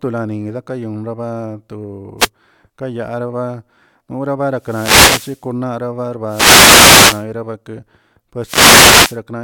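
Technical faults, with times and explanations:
2.18–2.29 s, 4.55–5.50 s, 6.26–7.26 s and 8.41–9.20 s, wireless microphone noise hit: the analogue FM radio link fades as reflected signals cancel, so receiver noise swells into bursts of static and swish, briefly at first, then for roughly a second each time.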